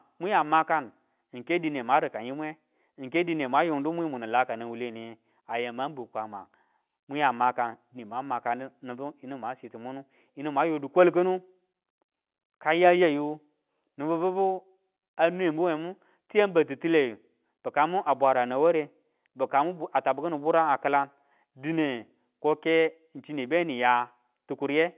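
Listening through this speech, carried on ordinary mu-law telephone coding, nothing stood out as a technical problem.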